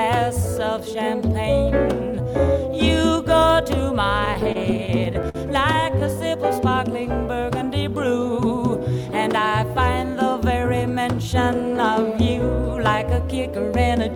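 From 4.25 to 5.37 s, then again from 5.73 to 6.03 s, you get repeated stalls (stutter): packets arrived late, the jitter buffer kept running dry, and the last sound was stretched to cover each wait. Nothing's lost, but the sound drags and hiccups, with the longest hold about 54 ms.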